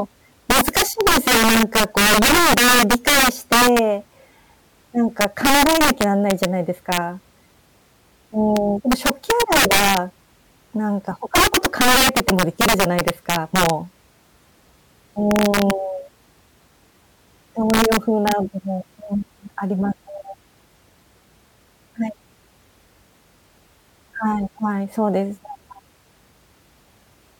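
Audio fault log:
0.50–3.79, 5.21–6.45, 6.92–6.97, 8.57, 8.92–9.97, 11.35–13.70, 15.31–15.71 and 17.70–18.32 s, integer overflow: violent, snapping cracks burst out of the louder parts of the speech, much harsher than clipping. The level overshoots the integer limit, by about 11 dB in the first and worst run and barely at all at 8.57 s. Instead of being held at the limit, each overshooting peak wraps around to the opposite sign, jumping across the full range.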